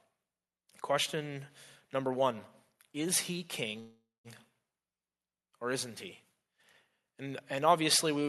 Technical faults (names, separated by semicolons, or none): call audio freeze